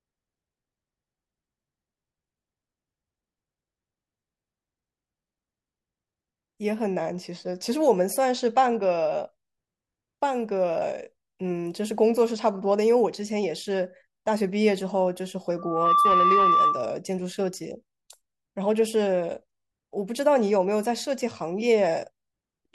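At 15.58 s a loudspeaker feedback squeal breaks into the speech and holds until 16.98 s. A microphone is hearing the loudspeaker it drives, and at 1.2 kHz the loop gain has gone past unity, so that tone feeds itself. It swells over roughly a third of a second into a steady, piercing whistle that sits a few decibels above the speech and stops about 1.4 s after it began.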